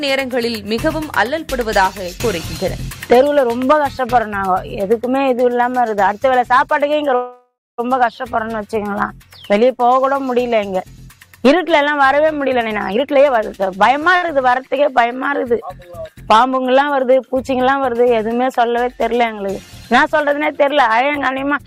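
From 7.15 to 7.80 s there is a call audio freeze, likely caused by packets held up in transit that drained the jitter buffer. The last sound carries on as a fading buzz or hiss, ending in about 210 ms of silence. The audio then resumes where it stopped, nothing lost, but now about 628 ms late.

Between 12.50 and 14.15 s a jitter buffer speed-up occurs. With more audio queued than its target, the receiver repeatedly cut out pitch-period-sized slices, about 0.4 s in total. The sound plays at 125% speed with unchanged pitch and comes across as rushed.

Right after, from 14.16 to 14.24 s, a short stall from a late packet follows. One packet missed its slot, the buffer ran dry, and the receiver stretched the final sound for 64 ms before continuing. That sound lingers briefly with a slight buzz or dip, though nothing is skipped.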